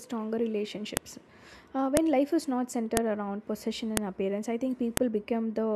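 At 0.97, 1.97, 2.97, 3.97 and 4.97 s, one second apart, the speech is broken by a sharp, loud click: file header played as audio, where each joined piece's header bytes are decoded as samples. A waveform shows a narrow spike, and a spectrogram shows a full-band vertical line.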